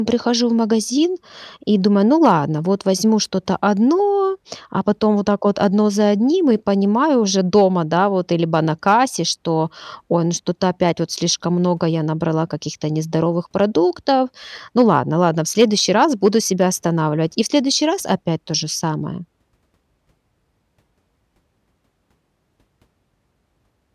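Nothing goes wrong anywhere in the speech here, so there's no technical fault to point to at any moment of the recording.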